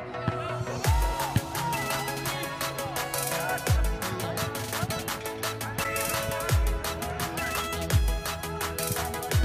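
At 5.83 to 5.86 s, a corrupt frame decoded: damaged bits in one compressed frame produce a brief chirp, squeak or burst of noise near -20 dBFS, spectrally misplaced rather than silent like a dropout.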